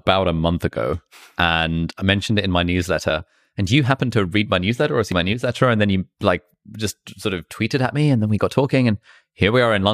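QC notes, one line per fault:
3.1 s, 5.12 s and 6.54 s, dropped buffer (overrun): the sound jumps forward, after "mentioned it in my", between "read my newsletter or" and "my newsletter and then", and between "and then you like" and "just sort of tweeted". About 20 ms, about 40 ms and about 20 ms of audio are missing. The likely cause is input samples being overwritten before they were read, so the two edges butt together with no gap. On a waveform this shows as an abrupt discontinuity. A spectrogram shows a thin vertical broadband line at each point.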